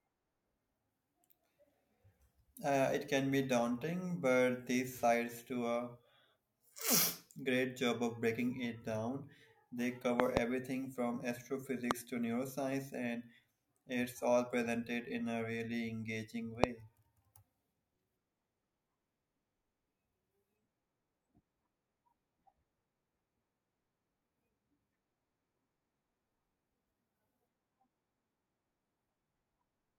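A sudden voltage step, most likely from a plug, a switch, static or a driver glitch, entered the signal path three times, and the circuits downstream turned each step into a brief spike. These are loud pops, roughly 25 dB above the speech, which carries on underneath. Between 10.2 and 10.39 s there is a double pop. From 11.91 to 11.93 s a single pop falls just before "to neuroscience and it's", and from 16.64 to 16.66 s another comes right after "in a really engaging".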